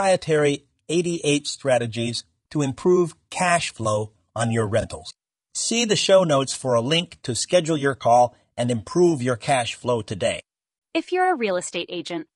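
Throughout the recording, the speech was likely passed through low-delay AAC compression, the AAC-ELD style codec used for video calls. It codes each short frame as roughly 500 frequency lines through a low-delay window, and the damage is plainly audible, which fits a bitrate around 32 kbps. With so few bits for those lines, the voice comes out rough and grainy, with noise filling the gaps between harmonics and a top band that sounds lowered or synthetic.

From 4.81 to 4.85 s, just after "cash flow on your", there is an AAC frame loss with concealment. About 20 ms of coded audio never reached the decoder, which points to a single lost frame. The decoder covered the gap by rebuilding it from the last good spectrum, with scrambled signs or interpolated energy. The result is a brief smeared, noisy or phasey patch in the speech.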